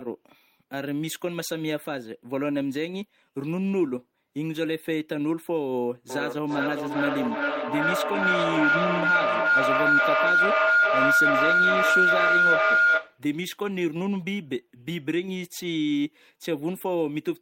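At 6.1 s a feedback howl starts creeping in and keeps going until 13.26 s. Two devices in the same room were sharing the call, so the microphone-to-speaker loop gained level on every trip and the repeats grew instead of dying away. It narrows onto a tone around 1.5 kHz, pulsing roughly every 400 ms, and at its loudest sits about 7 dB above the speech before the loop gets broken.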